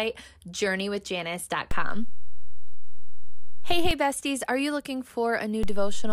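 At 1.71 s the zero line jumps by about -17 dBFS, a DC step. You get a low thump there and another as it drops back at 3.91 s. At 5.63 s it jumps again, about -18 dBFS, and holds to the end. The speech rides on unchanged throughout.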